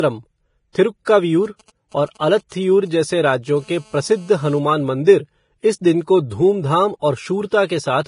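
The whole clip has a hissy, grainy treble and roughened speech, heavy damage that likely comes from Vorbis compression at a bitrate around 28 kbps. Pre-echo appears at 0.72 to 0.75 s (24 ms) and 1.05 to 1.07 s (22 ms): a short hiss smears in just ahead of sharp attacks. From 1.45 to 3.58 s you get GSM signalling bursts, a galloping dit-dit-dit of short 217 Hz buzzes, roughly 30 dB under the speech, from a nearby 2G phone whose radio pulses get rectified. That turns into a steady GSM phone buzz from 3.59 to 4.59 s, a raspy 217 Hz tone about 32 dB down, consistent with the phone being on a call. One more pre-echo hiss lands at 7.51 s.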